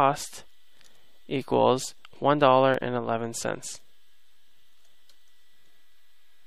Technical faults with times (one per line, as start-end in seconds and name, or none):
2.74 overlap between stream segments